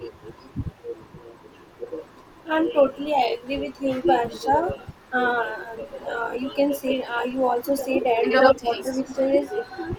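A block size mismatch (truncated) runs through the whole speech clip. A steady buzz at 46.9 Hz sits under everything, which fits a stage writing 1024-sample blocks that the next stage only partly reads, with each block's tail discarded. Tempo and pitch stay normal. The fixed buzz rate tells it apart from random dropouts.

From 0.78 to 0.93 s there is speech suppressed in double talk. The voice dips by around 10 dB for roughly 150 ms, likely because an echo canceller turned down both sides while both were talking. This is a loss of level, with no added copy.

Echo leak follows at 4.34 to 4.43 s (about 25 dB below the speech), 5.93 to 6.0 s (about 40 dB below), and 8.3 to 9.14 s (about as loud as the speech). Each time a copy trails the voice by 74 ms, likely loudspeaker pickup the echo canceller failed to remove. That fixed 74 ms lag marks it as echo rather than reverberation.

Within that last echo, double-talk suppression returns at 8.54 to 8.71 s, with a drop of roughly 20 dB, and at 9.03 to 9.12 s, with a shallower drop of about 5 dB.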